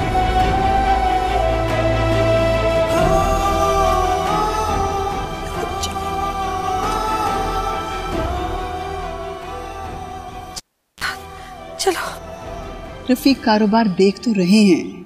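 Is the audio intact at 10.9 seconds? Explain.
No: from 10.58 to 11.04 s there is a pop, near silence, 37 ms of 60 Hz mains buzz as only the tip touches, then another pop. A cable was pulled and plugged in.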